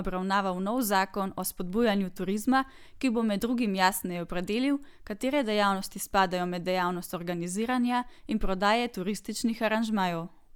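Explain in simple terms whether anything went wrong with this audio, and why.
Nothing went wrong here; listening through the speech, no fault of any kind can be heard at any point, so there is nothing to fix.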